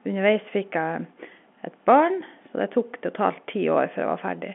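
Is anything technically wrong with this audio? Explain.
No, nothing's technically wrong here; it's just speech over ordinary G.711 telephone coding, so the narrow telephone band of roughly 200 Hz to 3.4 kHz is expected.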